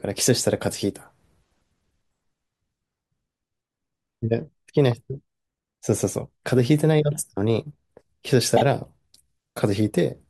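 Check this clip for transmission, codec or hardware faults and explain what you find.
One fault: a brief stutter in the speech at 8.56 to 8.62 s, where a tiny slice of sound plays three times in a row. These are repeated frames. A single 24 ms compressed block was written or sent more than once, so the decoder played it again twice. The speech runs 48 ms longer than it should.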